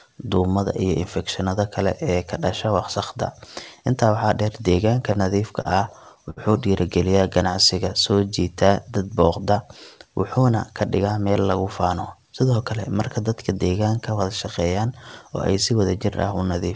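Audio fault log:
5.62 to 6.39 s, repeated stalls (stutter): the audio halts four times as packets arrive late and the jitter buffer empties; the receiver stretches the last sound to cover about 109 ms in all, longest gap 63 ms. The waveform shows short repeated, smeared stretches; the spectrogram shows frozen, blurred bands, nothing missing.
7.51 to 8.21 s, jitter buffer slow-down: the receiver repeats pitch periods to rebuild its reserve, adding about 60 ms so the sound runs at 93% speed, same pitch, drawn out. The waveform looks stretched, and spectrogram harmonics hold level but last longer.
10.22 to 11.27 s, jitter buffer speed-up: excess buffered audio is trimmed by cutting short pitch-period pieces, roughly a tenth of a second in total, so the sound runs about 8% fast and hurried at unchanged pitch. The waveform appears compressed in time; spectrogram features sit closer together.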